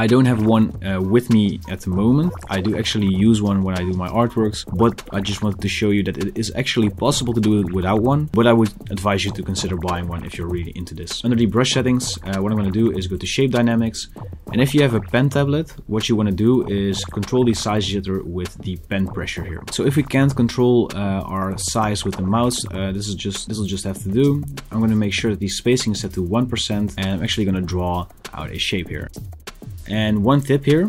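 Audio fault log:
No faults can be heard anywhere in this clip. There is nothing to enter in this log.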